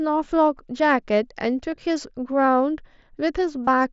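Voice packets on the headset-to-phone link went missing twice, and the receiver filled each gap by repeating the best-matching stretch of the most recent waveform. That is concealed Bluetooth headset packet loss. At 1.72 to 1.78 s, about 22 ms were lost in short runs scattered over 60 ms, none longer than 15 ms. At 3.66 s a 30 ms loss produces a brief buzzy, held tone with a slight warble as real sound resumes, over the mSBC wideband band.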